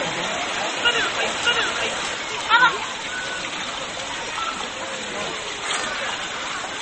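From the first instant until 2.14 s, the audio is most likely mixed in twice, with a second full-band copy held out of step with the first: a doubled audio track. It is already under way when the clip begins. The copy trails by roughly 0.7 s at about the same loudness, so every event is heard again as a dry, uncoloured repeat with no decay. At 2.14 s the repeat drops out abruptly rather than fading.

Running through the whole clip is MP3 compression at a bitrate that fits 32 kbps, likely the cause of the damage. Starved of bits, the encoder has cut everything above 8.4 kHz, leaving the sound dull and closed-in. It has also zeroed weaker frequency lines that flicker on and off between frames. The damage is plainly audible as a watery, swirling texture, with metallic chirps on bright sounds and smeared, softened attacks.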